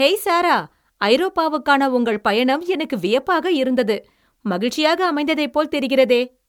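The speech sounds swirly, smeared and hollow throughout, its attacks blurred: likely generation loss from about four MP3 passes, each adding fresh quantisation damage.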